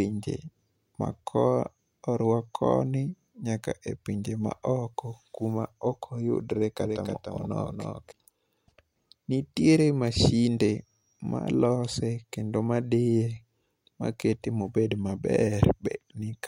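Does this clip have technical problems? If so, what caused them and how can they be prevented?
Yes. From 6.84 to 8.12 s there is a doubled audio track, most likely because a second, slower capture path fed the same signal into the mix alongside the first. A full-band copy of the speech trails the original by roughly a third of a second, a few decibels quieter, with no reverb tail or room colour, and it cuts in and out abruptly at those edges. To prevent it, route each source through a single capture path and check for duplicate inputs before mixing.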